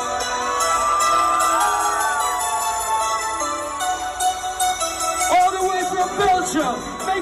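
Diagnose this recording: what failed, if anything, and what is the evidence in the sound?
Hard clipping runs through the whole clip. The signal was pushed about 9 dB past what a stage could pass, most likely at the converter. A few percent of samples sit flat where their peaks were cut. Loud peaks crackle from the added high harmonics.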